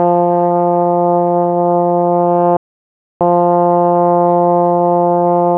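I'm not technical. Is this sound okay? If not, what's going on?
No. At about 2.57 seconds the sound cuts out completely and stays silent until about 3.21 seconds, a gap of roughly 0.64 seconds, before carrying on. This is a playback stall. The likely cause is that the player ran short of data, or was held up by something else on the device, so it had nothing to send to the speakers until it caught up again.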